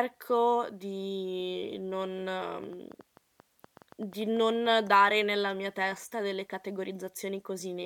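A speech clip with a train of clicks running from about 2.42 s to 4.88 s, starting just after "di non" and clearing before "nella mia testa delle". You get roughly fifteen similar sharp pops at about 6.5 per second, unevenly spaced, and they're about as loud as the speech itself, so they tick right through the gaps too. That pattern likely comes from interference from nearby gear or a faulty connection or power supply.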